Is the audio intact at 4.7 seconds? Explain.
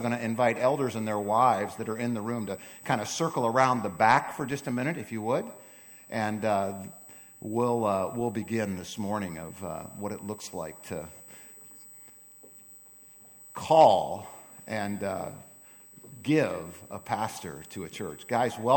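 No. At 4.7 seconds, as throughout the clip, a steady high-pitched USB whine sits roughly 25 dB below the sound, pitched at 8 kHz and strongest at 16 kHz. It comes from current drawn in 125-microsecond USB microframes leaking in through power or ground.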